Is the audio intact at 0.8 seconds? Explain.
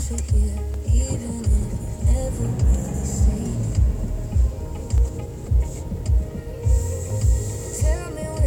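No. Clock drift buffer slips span 0.74 s to 7.10 s, recurring every 2.12 s. Two devices likely run on clocks several hundred ppm apart, so their buffer periodically drops or repeats roughly 70 samples, producing about four evenly spaced clicks.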